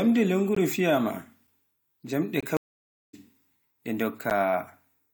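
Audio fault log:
0.55 s, 1.47 s, 2.41 to 2.43 s and 4.30 s: block of digital silence. The speech drops to silence for 16, 5, 21 and 11 ms. The sound cuts out and back with no fade. Gap lengths fit 256-, 512- and 1024-sample buffers left unfilled in time.
2.57 to 3.14 s: stream reconnect. The connection broke and the audio went silent for 563 ms. A fresh decoder then resumed the speech mid-stream, roughly 0.4 s further on, so a short stretch is skipped.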